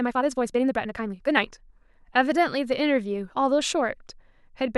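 From the start to 1.76 s the speech races along at about 1.69 times its natural pace, sounding hurried, yet its pitch stays where it belongs, so nothing chipmunk-like is heard. The pace then drops back abruptly to normal. This is a time-stretched section, likely the result of software squeezing the opening to fit a shorter length by discarding short slices of audio and splicing the remainder together, which leaves the rushed texture.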